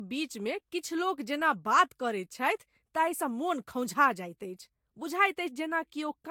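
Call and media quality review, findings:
Swirly, smeared, hollow speech with blurred attacks throughout, nothing above 18.8 kHz; likely generation loss, about three lossy re-encodes, consistent with Vorbis near 70 kbit/s.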